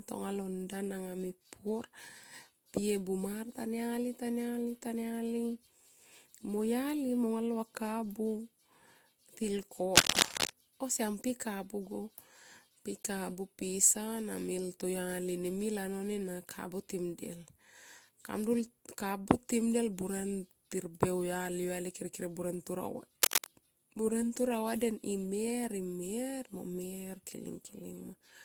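Throughout the speech, the layered artefacts heard together are likely transcoding between lossy codecs, consistent with Vorbis near 65 kbit/s re-encoded as Opus near 32 kbit/s, with nothing above 20.3 kHz. From 9.95 to 10.51 s, a harsh rustling burst well above the speech is cable scratch noise, likely from a worn connector. A briefer, quieter scratch follows at 23.22 to 23.47 s.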